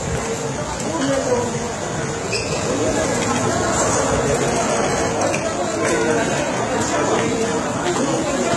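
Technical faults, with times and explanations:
Throughout: HE-AAC compression likely. The treble sounds synthetic and gritty, with heavy damage that fits a low bitrate around 16 kbps. It is copied up from lower bands rather than coded, so harmonics misalign. A spectrogram shows smeared, repeated high-band patterns and nothing above 11.8 kHz.
2.53–5.11 s: doubled audio track. A second full-band copy, roughly as loud as the original, trails about 150 ms behind, likely from a slower capture path. It has no decay and starts and stops abruptly. The waveform shows every transient repeated at a fixed offset.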